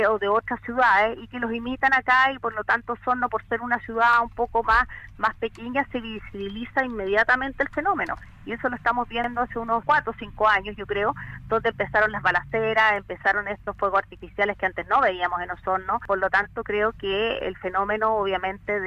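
At 4.13 s and 9.24 s, a repeated buffer: a 46 ms piece, which fits a 2048-sample buffer, plays twice with a hard join, giving a brief stutter.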